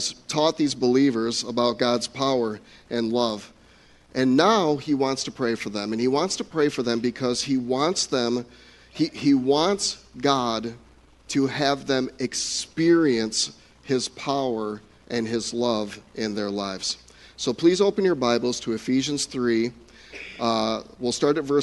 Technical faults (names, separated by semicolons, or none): none